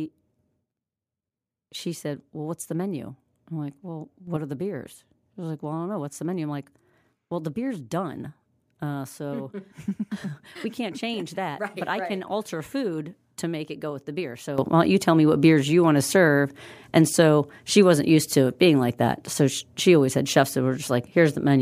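At 4.27 s, just before "are the beers", the level steps up by about 6 dB for roughly a tenth of a second, then drops back. At 14.58 s, after "go with the beer", a sudden gain jump of about 13 dB takes hold and lasts to the end. In both cases speech and background noise rise together, instantly, with no fade. The likely cause is a digital gain change applied without a ramp.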